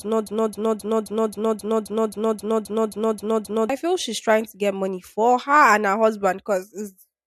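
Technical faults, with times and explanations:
0.0–3.7 s, broken-record loop: already under way when the clip opens, a 265 ms fragment repeats exactly, back to back, about 13 times until normal speech resumes at "feel she's trying to". A stalled stream likely kept resending its last buffer, so the intervening speech is lost.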